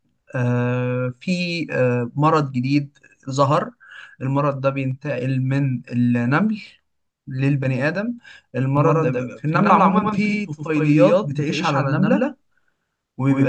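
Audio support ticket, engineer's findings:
Likely a second, slower capture path or a misaligned edit: doubled audio track from 8.77 s to end, a full-band echo-free copy about a tenth of a second behind, at roughly equal level, starting abruptly.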